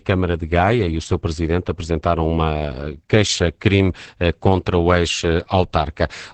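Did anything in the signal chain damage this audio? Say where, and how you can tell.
Yes, at the codec stage, and it runs through the whole clip. This is Opus voice compression pushed hard: the speech is muffled, with nothing above about 8.9 kHz, and has a hoarse, slightly robotic edge. That fits Opus in wideband SILK mode at a low rate, somewhere around 10 kbps. The linear-prediction coder keeps the spectral envelope but quantises the excitation coarsely, which is where the rasp and the buzzy, synthetic texture come from.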